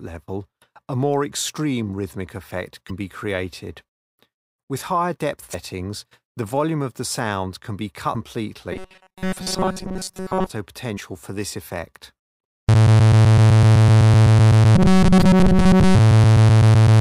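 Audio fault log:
2.86–2.91 s, 5.50–5.55 s, 8.11–8.16 s, 10.94–10.98 s, 15.19–15.23 s, damaged data in a compressed stream: corrupted bytes make the decoder misread frames, lose sync and hunt for the next header, so each spot gives a brief chirp or blip of about 40 ms.
8.73–10.50 s and 14.76–15.96 s, robotic sound from repeated short buffers: audio likely arrived too slowly, so the player looped roughly 5 ms chunks, most of the first stretch and all of the second, imposing a rigid metallic 188 Hz buzz on the sound.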